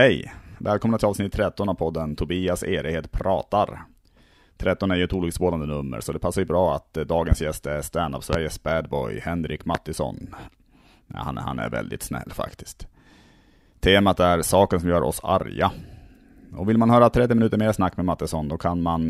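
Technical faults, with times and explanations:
7.32, 8.33 and 9.75 s: loud pop. Three sharp pops, each about 35 ms, sit well above the speech: the first after "ju bra att eh", the second after "gäst är standup", and the third is strongest. Each is likely a sudden voltage spike from a plug, switch or static discharge.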